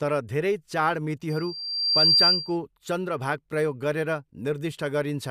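From 1.29 s to 2.57 s, the microphone picks up the loudspeaker it is feeding, and at about 4.7 kHz the gain around that loop climbs above one. That one frequency keeps reinforcing itself, producing a loudspeaker feedback squeal. A thin, piercing tone swells over roughly three-quarters of a second until it sits about 10 dB above the speech. It stays there, shrill and steady, then stops at 2.57 s.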